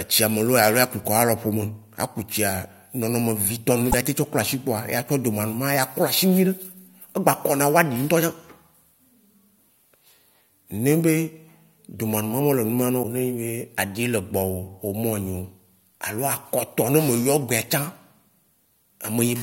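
Damaged data in the compressed stream of this speech recording makes the decoder lose sync, producing brief blips at 3.90–3.94 s, just before "ya te", and at 13.00–13.05 s.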